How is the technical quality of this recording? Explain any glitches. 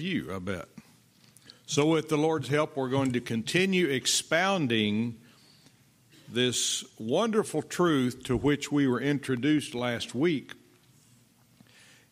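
One glitch stands out, a burst of CD scratch ticks. From 8.95 to 10.00 s, a scratch defeats the disc's error correction once per revolution, so the player conceals the lost samples, giving six regular ticks, each a couple of milliseconds at most.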